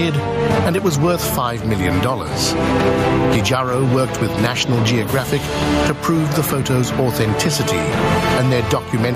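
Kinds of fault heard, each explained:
Gain pumping: The level is pulled down on each loud sound across the whole clip, with swings of about 15 dB. Loud and soft passages sit unnaturally close together and the sound feels squashed. The likely cause is input gain set far too high for the microphone, with a fast limiter or compressor clamping down on every peak and releasing between them.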